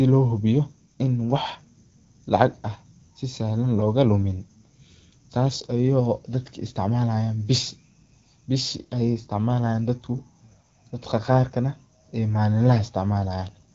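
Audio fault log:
No faults are heard: the speech passes through an AMR wideband (HD Voice) codec working at a rate consistent with 12.65 kbit/s, leaving only light coding traces and a band limit at about 7.5 kHz.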